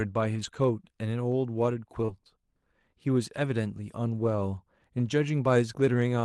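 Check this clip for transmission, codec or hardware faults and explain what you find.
The speech has three kinds of fault: a continuous block-rate buzz, error-corrected packet losses in three places, and one short concealed loss. It came through an Opus call path with its usual coding noise and a roughly 12 kHz top limit.

Block size mismatch (truncated), throughout: one stage writes longer blocks than the next reads, so each block's tail is discarded. The regular cuts produce a buzz at about 23.5 Hz, which fits a 1024-sample write size. The speed is unchanged.

Lost packet rebuilt from error correction, at 0.35 to 0.57 s, 2.08 to 2.10 s and 3.44 to 3.46 s: the lost audio was replaced from low-bitrate copies carried in the following packets. There is no gap. The first stretch covers about 120 ms and each of the others about 20 ms, and those passages sound rougher and noisier.

Short concealed packet loss, at 2.05 to 2.10 s: about 20 ms never arrived. 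The decoder extended the preceding sound for about 26 ms and then blended back into the real audio, which is heard as a brief smear. This loss overlaps the error-corrected frame at 2.08 s.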